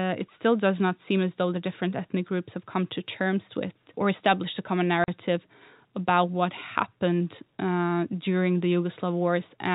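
At 5.04 s, just after "or established a common", packet loss filled with silence cuts the speech for 40 ms, until 5.08 s. Lost packets were replaced by silence. The gap fits two 20 ms packets. Its edges are abrupt.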